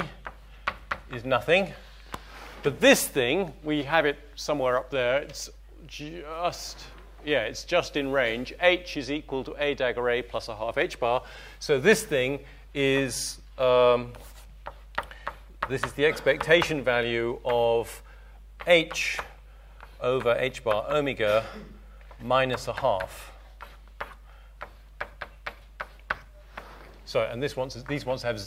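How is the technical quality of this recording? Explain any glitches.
The recording is marred by one fault. Mains hum runs throughout: a steady, fairly prominent 50 Hz drone about 20 dB under the sound, from power-line interference such as a ground loop or nearby transformer.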